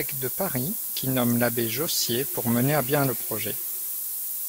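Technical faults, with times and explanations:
Throughout: DECT cordless phone buzz. A thin, steady buzz at 100 Hz, rich in harmonics, sits faintly beneath the speech. A nearby DECT handset or base transmits a brief radio burst every 10 ms, and the audio circuitry rectifies those bursts into a periodic tone.
Throughout: low bit depth with noise shaping. A thin hiss, roughly as loud as the speech, climbs steeply toward the top of the band. The coarse quantisation points to about 4 bits, and the rounding error has been fed back and pushed upward in frequency.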